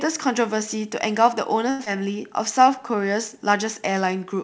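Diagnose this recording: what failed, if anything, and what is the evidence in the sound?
Short stall from a late packet, network and jitter buffer stage: from 1.70 to 1.81 s a sound is held about 93 ms too long while the buffer waited, then playback resumed without losing any audio.

Short concealed packet loss, network stage: at 1.85 to 1.88 s about 40 ms of speech never arrived in time. The concealment leaves a brief smear as the jitter buffer shortens its delay by roughly 30 ms.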